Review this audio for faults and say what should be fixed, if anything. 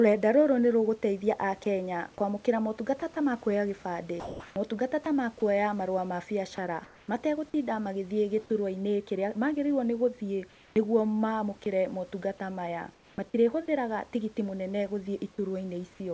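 At 1.64 s, just after "rũgũteithia a", there is sound dropped by the voice detector. A brief bit of sound gives way to comfort noise, likely because the detector took it for background.

Sound chopped by the voice detector occurs at 3.00–5.06 s, ending before "ta makũoya marũa", at 6.56–7.54 s, and at 10.52–13.18 s, ending before "matirĩhũthĩraga tigiti". The gating likely toggled repeatedly, swapping about 400, 300 and 500 ms of sound for synthetic noise. The audio went through the G.722 call path, which has nothing above 8 kHz.

Lower the detector threshold and lengthen its hangover time so quiet speech keeps transmitting.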